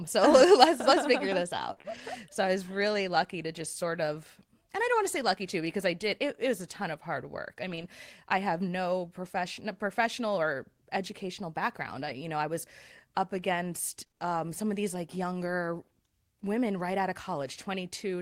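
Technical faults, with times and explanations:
0.31 to 2.00 s: scattered short gaps. A few lost packets, about 60 ms in all, were patched by continuing the preceding sound, leaving brief ticks and smears.
12.1 to 14.2 s: scattered short gaps. Several short dropouts totalling 80 ms, none longer than a few tens of milliseconds, were filled by extending the last sound, causing small hiccups.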